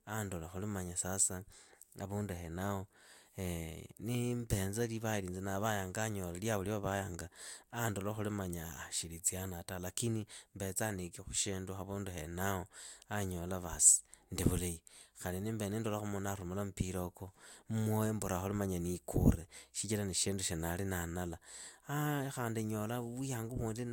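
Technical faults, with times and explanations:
Nothing stood out on listening to the speech here; no technical fault could be heard at any point.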